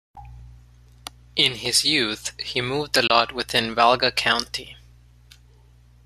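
A digital broadcast dropout hits from 3.07 to 3.10 s, just after "youth he moved a". The receiver stopped getting frames it could decode, probably because one failed its checksum, so it muted until valid data returned. The sound fades out over about 3 ms and leaves a hole of roughly 24 ms, which fits a single lost frame. It is a brief gap rather than a click, and the programme sent during it is gone.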